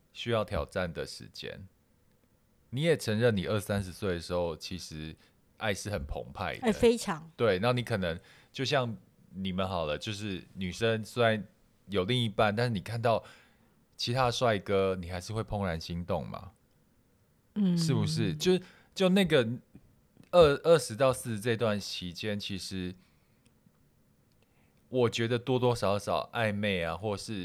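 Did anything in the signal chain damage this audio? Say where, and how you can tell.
No, nothing in the signal chain damaged this audio.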